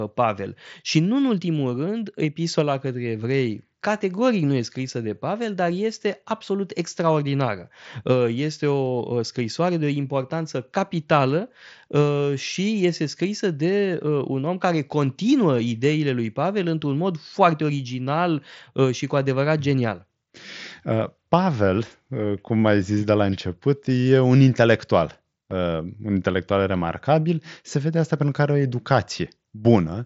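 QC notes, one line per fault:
Nothing to flag here, just speech carried over a Bluetooth mSBC headset link, with the top end stopping around 7.7 kHz as that path normally does.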